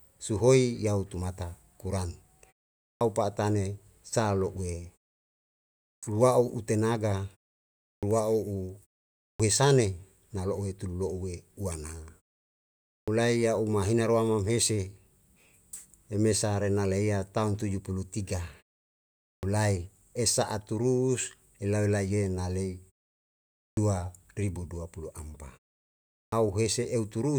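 A speech recording with a clipped start after a pause, eight times: at 2.93, 5.94, 7.95, 9.31, 12.99, 19.34, 23.68 and 26.24 s. Each time the talker resumes after roughly half a second to a second of quiet, the first 77 to 92 ms vanish, so the word jumps in without its onset. That's the output device dozing off during the gap and needing a moment to wake back up.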